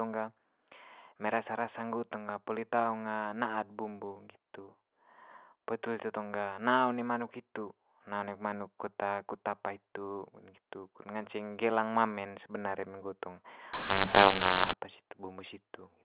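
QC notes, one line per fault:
13.73–14.73 s, mu-law and A-law mixed up: mu-law telephone samples decoded as A-law scramble levels, giving harsh distortion and hiss-filled pauses. Unlike clipping, quiet gaps turn noisy.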